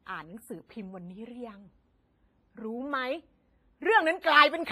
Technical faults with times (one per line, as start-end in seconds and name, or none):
0.00-4.71 WMA compression
4.22-4.24 pre-echo